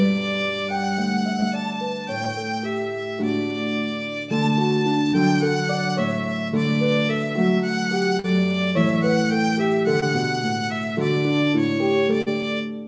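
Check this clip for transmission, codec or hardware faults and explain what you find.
Six transmission faults can be heard: five short gaps that the receiver concealed, and one longer burst of packet loss near the end. The call path's band limit is audible throughout: nothing sounds above 8 kHz, which fits a G.722 codec at 64 kbps.

Short concealed packet loss occurs at 1.40–1.44 s, 2.24–2.28 s, 5.10–5.15 s, 8.19–8.26 s and 10.00–10.04 s. In each case, about 20 ms of audio arrived too late to decode, or 40 ms at 8.19 s. The receiver extended the preceding sound, keeping its pitch or shaping it as noise, for roughly 17 to 42 ms and then crossfaded back into the real signal. Each gap is heard as a brief smear or wobble. At 5.10 s, a further 10 ms was dropped outright.

Burst of packet loss spans 12.22–12.43 s. Consecutive packets, about 40 ms in all, failed to arrive in time. The receiver bridged the gap by continuing the last sound for about 47 ms and fading it down, so it is heard as a held buzz or dying hiss rather than silence. 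Playback then resumes further on, with roughly 5 ms of audio removed to catch up.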